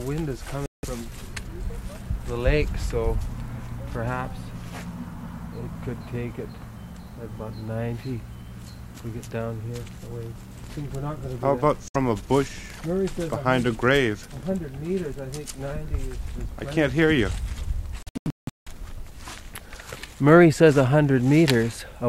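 The audio cuts to silence three times: 0.66–0.85 s, 11.88–11.96 s, and 18.03–18.68 s, the last as scattered holes with the longest near 0.17 s. This is likely Bluetooth dropout. Unlike an edit or pause, the sound resumes further along, as if it had kept playing.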